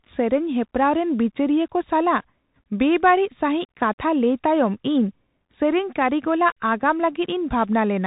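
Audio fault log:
Throughout, Bluetooth CVSD headset codec: the speech stops dead at about 3.8 kHz, and the damage is plainly audible. The one-bit delta coder can only nudge its level up or down each step, so sharp rises outrun it. S sounds turn scratchy and a grainy hiss sits under the voice, which fits a 64 kbps CVSD stream. A clean telephone band-limit would be just as muffled but free of that grit and slope distortion.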